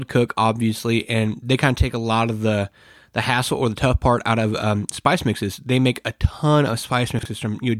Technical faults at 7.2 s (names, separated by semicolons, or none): chunks out of order